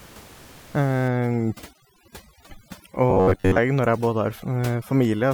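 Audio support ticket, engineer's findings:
Overdone noise removal, 1.08 s to end: room noise (about 23 dB under speech before this) collapses to near-silence with twinkling specks. Spectrogram showing sparse, flickering isolated bins.

Robotic sound from repeated short buffers, 3.10–3.58 s: rigid metallic 93.8 Hz buzz, likely from 10.7 ms chunks replayed for most of the span. Waveform shows roughly repeating cycles.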